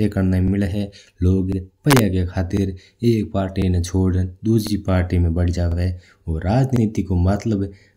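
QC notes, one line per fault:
0.48, 1.52, 2.57, 3.62, 4.67, 5.72, 6.76 and 7.81 s: overlapping chunks. The speech was handled in 1.0 s chunks, and each one began about 48 ms before the previous one ended. That slice plays twice at every join, so a stutter recurs roughly every 1.05 s. It lands just before "एक पार्टी ना छोड़ण" at 2.57 s, between "एक पार्टी" and "ना छोड़ण" at 3.62 s, and just before "पार्टी में" at 4.67 s.
1.91–1.99 s: integer overflow. A loud peak went about 1 dB past the integer limit. It was not clamped, so it wrapped to the opposite sign. The waveform jumps across the full range instead of flattening. That is heard as a harsh crack, far sharper than ordinary clipping. The overshoot is small, but the damage is not, because wrapping turns a slight excess into a full-scale swing.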